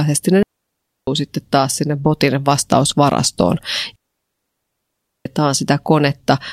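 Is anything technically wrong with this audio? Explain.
Yes. The speech has two digital wireless dropouts. The first runs from 0.43 to 1.07 s, a mute of about 0.65 s, ending just before "sitten taas sinne botin". The second follows "taas sinne botin vastausvarastoon" and lasts from 3.96 to 5.26 s, 1.3 s. The wireless receiver lost too much data and muted with a very fast fade. Each is a clean hole of near silence, with no noise burst on either side.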